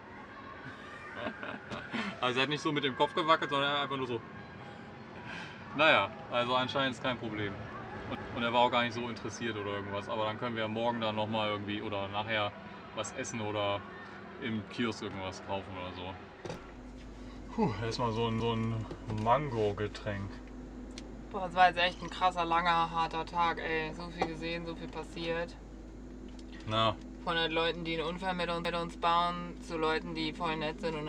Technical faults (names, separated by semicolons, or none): overlapping chunks